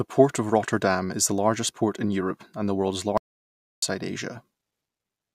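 Speech clip with an audio dropout to silence from 3.18 to 3.83 s, just after "and the world's". The signal cuts mid-flow to silence with no room tone, losing about 650 ms, likely from the input briefly disconnecting or muting while recording continued.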